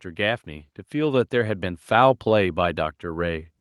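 Speech, with automatic gain rising from 0.16 to 2.23 s: the gain control judged the input too quiet and lifted it by about 6 dB, so voice and background swell together. On a waveform the envelope widens steadily; a spectrogram brightens evenly across all frequencies.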